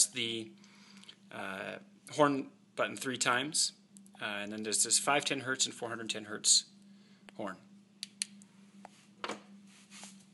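Nothing in the recording stood out as a fault on listening.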